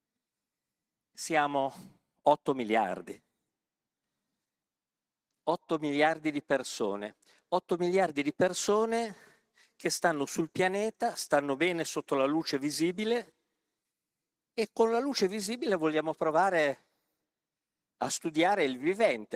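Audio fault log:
throughout: Opus voice compression, hoarse, slightly robotic speech from coarse coding at a rate near 16 kbps; spectrogram shows smeared harmonics and patchy energy above 8 kHz.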